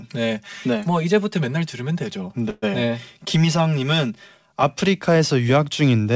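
From the start until 4.63 s the speech sounds hollow and phasey. This is channel delay (comb filtering): one channel lags by roughly 5 ms, and summing to mono notches the spectrum from around 100 Hz upward. From 0.64 s to 1.36 s the speech runs 6.2% fast and sits about 104 cents sharp, then snaps back. A drift correction step is the likely cause, with clock-matching software jumping the playback rate. From 2.50 s to 2.64 s the sound stalls into a fading buzz or hiss of 123 ms, ending in about 10 ms of silence. It then resumes with nothing lost. This is likely a call audio freeze, where an empty jitter buffer was filled with the last sound.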